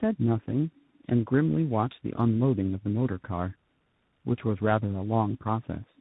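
Tandem speech coding runs throughout the clip. The speech passed through two speech coders in a row, with the sound pointing to an 8 kbit/s G.729A stage followed by CVSD after a G.711 A-law link. Each coder degraded the previous one's output, leaving speech rough, warbly and muffled, with nothing above 3.8 kHz.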